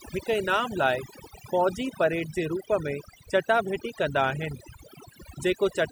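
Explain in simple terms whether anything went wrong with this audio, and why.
Overdone noise removal runs through the whole recording. A cleanup tool set too aggressively switched off every frequency band resembling the background noise, taking the softer parts of the speech with it, so pauses fall to near silence with twinkling specks.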